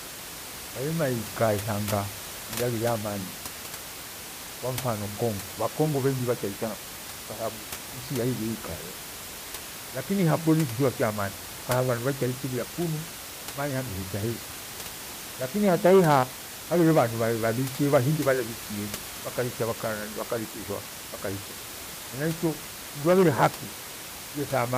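The speech signal shows no technical faults, with only the room's own background noise sitting about 12 dB below the speech.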